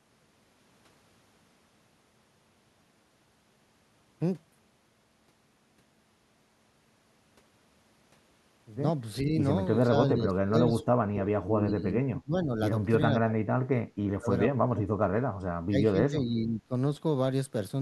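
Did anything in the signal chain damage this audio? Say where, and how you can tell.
Yes. Clock slip clicks run from 0.43 s to 17.10 s: about fifteen faint single-sample ticks roughly every 1.5 s. This is likely a converter or driver stage running on an unsynchronised clock, drifting by roughly 15 ppm, so a sample drops or repeats with each slip.

Speech suppressed in double talk appears in the call processing at 9.23–9.37, 9.87–9.96, 10.15–10.75, 11.09–12.6, 13.24–14.32, 14.52–14.96 and 15.5–16.74 s. The speech dips by about 5 dB at first and by up to about 35 dB at 10.15–10.75 s. This is likely an echo canceller attenuating the talker during overlapping speech.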